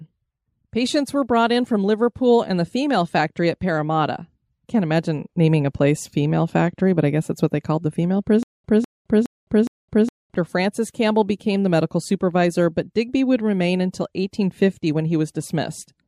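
Speech clip with a stutter with silent gaps from 8.43 to 10.34 s, likely a stalled stream retrying: a 0.2 s fragment repeats four times, each followed by about 0.21 s of digital silence, and the underlying speech is lost.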